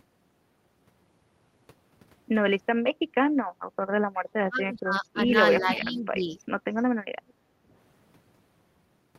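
At 3.05 to 3.09 s, the room background dips by about 13 dB, then returns. This is background gated by the echo canceller. While the far side played through the loudspeaker, the canceller pulled the microphone down hard. It happens again from 3.46 to 3.74 s, a deeper and longer hole of about 14 dB. The room tone sinks, then snaps back once the canceller releases.

From 4.16 to 5.34 s, the speech fades sharply. The deepest dips reach about 35 dB, across roughly a second in all. This is speech suppressed in double talk. Both sides were likely talking at once, so the canceller could not tell the local talker from the loudspeaker echo. It turned everything down. A milder dip of about 10 dB follows from 5.6 to 6.32 s.

Inside that second dip, from 5.71 to 6.01 s, a delayed copy of the speech appears. It trails by 380 ms and sits about 10 dB under the direct speech. This is echo leak. The far end's canceller likely failed to remove all of its loudspeaker's sound from its microphone, and the remainder came back. 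Two faint scraps with the same 380 ms delay follow, at 6.77 to 6.83 s and 7.28 to 7.33 s, far below the speech.

Finally, from 7.42 to 7.59 s, the background is gated once more. It drops by about 10 dB, then recovers.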